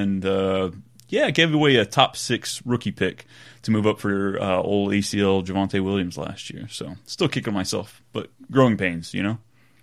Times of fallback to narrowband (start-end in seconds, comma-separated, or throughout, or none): none